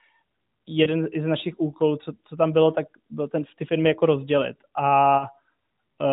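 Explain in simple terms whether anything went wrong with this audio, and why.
Two short glitches interrupt the speech, at 0.84 to 0.88 s and at 5.18 to 5.25 s. Both are lost AMR speech frames. A radio error spoiled a chunk of the phone signal. The decoder guessed the missing piece by repeating the last good sound more quietly. Each gap is about 20 ms long, which fits one lost frame. So each is heard as a brief dip or wobble. The narrowband phone sound itself is working normally here.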